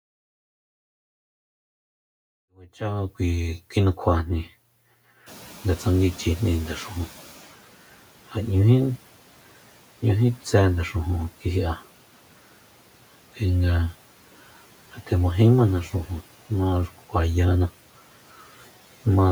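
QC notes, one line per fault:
5.26–7.49 s, noise suppressor catching up: background noise jumps around 5.5 s. Suppression lags, so noise comes through with less reduction, then sinks about 9 dB over 2.23 s.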